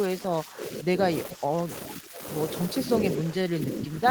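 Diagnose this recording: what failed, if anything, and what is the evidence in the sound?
The speech keeps ducking at 0.07–1.03 s, 1.33–1.71 s, 1.98–2.19 s, 2.85–2.91 s and 3.14–4.06 s, sinking by up to about 20 dB at the end. That's likely speech suppressed in double talk: the call-processing echo canceller clamped down while both ends talked.

There's also a short echo leak at 1.31–1.35 s, a faint copy about 20 dB under the speech, arriving 416 ms late. It's likely residual loudspeaker pickup that the echo canceller at the far end didn't fully remove and sent back.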